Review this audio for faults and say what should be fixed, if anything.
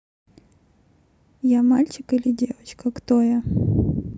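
No faults turn up in the speech, so there is nothing to fix. No repair or preventive step is needed for this recording.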